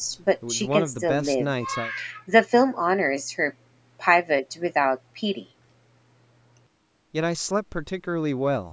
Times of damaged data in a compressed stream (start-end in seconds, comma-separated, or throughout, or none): none